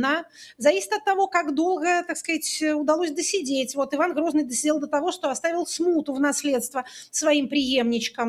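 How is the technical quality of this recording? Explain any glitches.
No glitches are audible anywhere in the recording, so there is nothing to explain.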